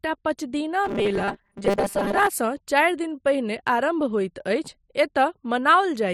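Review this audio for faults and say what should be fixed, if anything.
From 0.84 to 2.27 s the speech has robotic sound from repeated short buffers, a rigid metallic buzz at 200 Hz. The likely cause is late audio covered by repeating a 5 ms slice, so about half the sound is repeats. Enlarging the playback buffer would prevent it.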